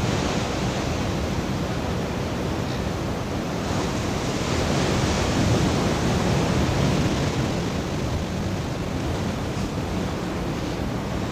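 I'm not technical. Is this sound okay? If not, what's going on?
No. From about 7.01 to 9.03 seconds there is a time-stretched section, most likely from editing software squeezing that stretch to fit a shorter slot. It played about 1.5 times faster by cutting out tiny slices of sound while holding the pitch steady. So the pitch stays the same, but the pace suddenly jumps, and those two seconds sound rushed before settling back to normal speed.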